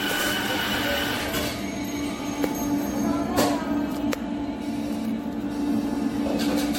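Running through the whole clip is a buzzing, chirping layer pulsing at about 300 Hz, roughly 25 dB below the sound: computer activity noise, from processor or peripheral load shifting the audio circuit's shared ground. Also throughout, the sound is swirly, smeared and hollow, with blurred attacks and nothing above 16.6 kHz. This is generation loss, likely from several successive MP3 re-encodes, which fits a 64 kbit/s chain.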